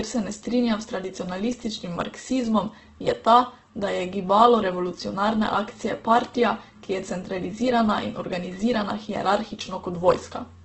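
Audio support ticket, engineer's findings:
Speech sounds grainy, rough and noisy throughout. Heavy damage, no content above 8.1 kHz. Likely Opus compression in CELT mode: band energies kept, starved bands filled with folded or noise content. Wideband limit fits a bitrate around 12 kbps.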